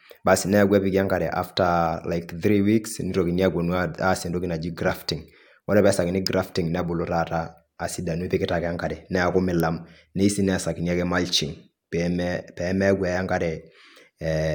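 A nearby switch, motor or static discharge likely arced and induced brief pulses into the audio line, producing an electrical switching spike at 6.27 s and again at 9.6 s. Each one is a sharp snap or tight cluster of clicks laid over the speech.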